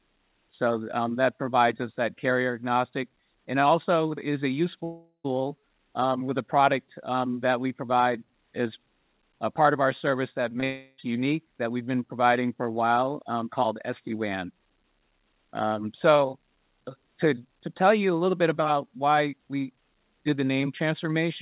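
From 4.84 to 5.26 s, a long network dropout is the likely cause. The last sound is stretched into a fading buzz or hiss that ends in about 0.11 s of silence, and roughly 0.4 s of audio never returns. At 10.6 s, a 20 ms short concealed packet loss briefly smears the sound as the receiver extrapolates across the gap. From 10.64 to 11.0 s, what is likely a second dropout follows directly. About 0.34 s is replaced by a decaying continuation with no full silence before the audio resumes. Throughout the clip, nothing is heard above 4 kHz, which matches a G.711 A-law call at 64 kbps.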